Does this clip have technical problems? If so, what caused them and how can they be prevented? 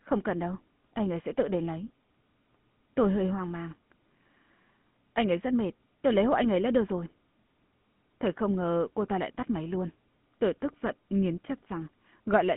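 Yes. GSM full-rate codec damage runs throughout: buzzy, gravelly speech with nothing above 3.8 kHz. The excitation is crudely pulse-coded, which fits roughly 13 kbps. Use a wideband codec to prevent it.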